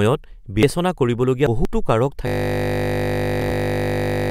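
Around 0.54 s and again near 1.47 s, compressed frames get skipped, so the speech jumps ahead by roughly a tenth, then a fifth, of a second. From 2.28 s to the end, a system hang loop replays one 20 ms chunk over a hundred times, giving a steady 50 Hz buzz. Around 3.23 s, another roughly 300 ms of frames is skipped.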